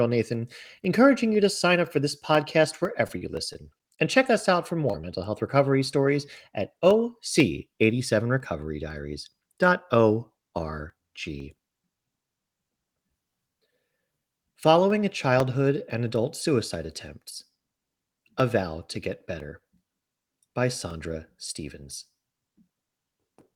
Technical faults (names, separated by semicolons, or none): periodic USB or driver dropouts; repeated packet loss (robotic sound); short concealed packet loss